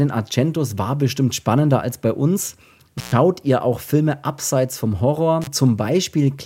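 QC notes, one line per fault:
2.98–3.12 s and 5.42–5.47 s, intermittent contact: the signal drops out for about 117 ms after "spannender als bei uns" (resuming at "ihr auch"), then for about 34 ms after "abseits vom". A loose connection briefly opens, giving crackle at each edge and faint hiss while open.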